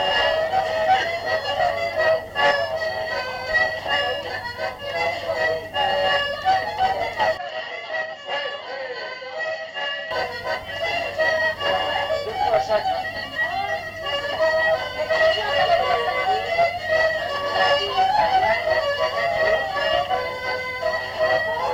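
From 7.37 s to 10.11 s the sound turns dull and boxy, with nothing above 7.6 kHz. It drops about 10 dB in level and gains a new noise floor roughly 35 dB down, with no gap at either transition. The likely cause is the input switching to a poorer device.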